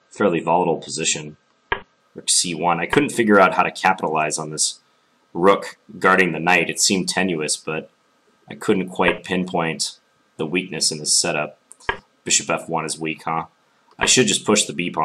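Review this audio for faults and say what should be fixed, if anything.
Adaptive stream starting at a low bitrate, from 0.0 to 2.0 s: for the first two seconds nothing is present above 8.3 kHz and codec artefacts are stronger. At 2.0 s the treble returns at once, with no gap. The player opened on a cheap version of the stream to start quickly, then switched up once it had measured the connection. The sound fits an MP3 stream stepping from about 32 kbit/s to 128 kbit/s. To prevent it, start playback at the higher bitrate or buffer until that version is available.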